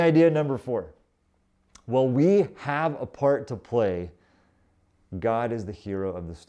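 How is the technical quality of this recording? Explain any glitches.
No technical glitches can be heard anywhere in this speech recording. There is nothing here that needs explaining.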